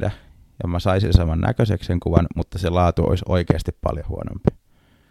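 Finnish speech, broken by four loud pops. Each is a single sharp click, about 20 dB above the speech, lasting under 30 ms. The first lands at 1.15–1.17 s, after "ja mä saisin". The second is at 2.17–2.20 s, after "näköiseksi sen". The third hits 3.50–3.53 s, after "mutta se laatu olisi". The last falls at 4.48–4.50 s. The speech carries on underneath each one. A brief voltage spike, likely from static or a driver glitch, caused these.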